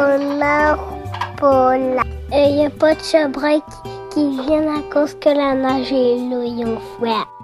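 At 2.02 s there is a single brief glitch caused by damaged data in a compressed stream. At that point the encoded bitstream contains corrupted bytes, so the decoder cannot parse the affected frame. It loses synchronisation and has to search forward for the next valid frame header before decoding resumes. The result is a short, abrupt chirp or blip that interrupts the audio for a moment, after which playback continues from the next intact frame.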